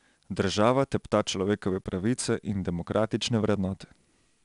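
From start to finish the speech carries 4-bit ADPCM compression: each sample is coded as a coarse step from a predicted value, so the error rides up and down with the signal as gritty hiss on louder syllables. A spectrogram shows broadband noise filling in beneath loud passages and nothing above 10.7 kHz, which fits a rate near 88 kbps.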